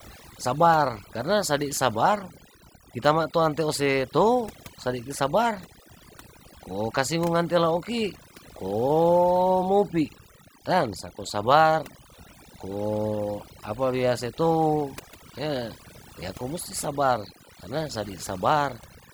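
Overdone noise removal runs through the whole recording. A noise reduction stage was set far too aggressively, so any frequency band sitting close to its noise estimate is pulled down or shut off, taking the quieter parts of the speech with it. Between phrases the background drops to near silence dotted with twinkling specks. A spectrogram shows a dark floor sprinkled with isolated bright dots and ragged, hollowed-out speech harmonics.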